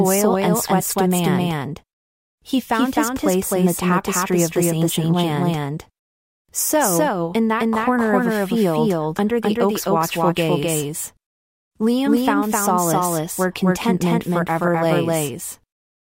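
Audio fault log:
throughout: doubled audio track. The speech is heard twice, with a second full-band copy trailing the first by roughly 300 ms. The copy is about as loud as the original, so every syllable returns as a distinct, equally strong repeat. It carries no decay and no room colour, so it is not an echo. This most likely comes from the same signal being mixed in a second time through a slower path.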